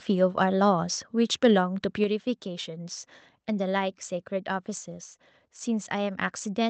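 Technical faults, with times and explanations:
2.04 s, microphone volume stepped down: speech and background suddenly fall about 4 dB. This is likely the call software cutting input gain in one step.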